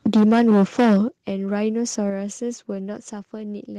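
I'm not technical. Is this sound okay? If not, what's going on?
No. The system that turns the sound into digital form has an unsteady internal clock, a fault called sample clock jitter. Its timing wobbles slightly, adding a faint hiss or roughness throughout the speech that gets stronger on loud and sharp sounds and disappears in pauses.

From 0.06 to 0.97 seconds, the loudest parts of the speech sound harsh and crackly, with their peaks flattened. This is likely microphone overload: the recording level was set too high, so the strongest moments went past what the equipment could capture.

The overall volume drops suddenly three times, at 0.07, 1.08 and 2.1 seconds. The drop at 1.08 seconds is the biggest. This is likely the microphone volume stepped down by the call software, which turned the microphone level down in sudden steps after it detected sound that was too loud.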